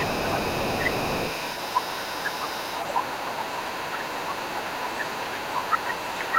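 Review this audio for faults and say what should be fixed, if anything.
The echo canceller likely failed to remove all of the far end's loudspeaker sound from the microphone, so the other side's voice leaks through for the whole clip, from 0.0 to 6.38 s. It sits roughly 20 dB under the main talker: faint, but always there behind the speech. Prevent it by giving the echo canceller a clean loudspeaker reference and letting it converge, or by using a headset.

Between 3.02 and 3.25 s both sides were talking at once, and the echo canceller likely could not tell the local talker from the loudspeaker echo, so it turned everything down. The result is speech suppressed in double talk. The talker's voice dips by around 25 dB in brief pieces adding up to roughly 150 ms. Prevent it with double-talk detection that holds back suppression while the near-end talker is active.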